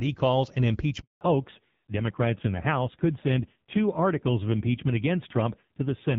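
At 1.01 s the call is handed from one network to another, and no speech frames reach the receiver while the link switches over. This is a handover gap: the voice dies away within a few tens of milliseconds and a flat silence holds for 200 ms, until 1.21 s, when the new connection starts carrying audio. Whatever was said in that window is simply missing.

From 1.21 s to the end, the call shows a fallback to narrowband. The connection has left HD Voice, whose first second sounds clear with only light coding damage, consistent with AMR-WB at around 12.65 kbit/s. It has dropped to an older narrowband codec. Nothing above 4 kHz survives, so the voice turns duller and rougher, which fits AMR-NB at a low rate near 5.9 kbit/s.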